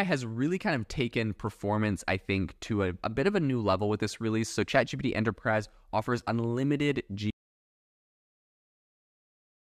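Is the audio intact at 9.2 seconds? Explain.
No. At 9.2 seconds the clip is inside an audio dropout to silence that runs from 7.30 s to the end. The speech cuts off abruptly into silence with no room tone, likely because the input was lost while recording continued writing silence.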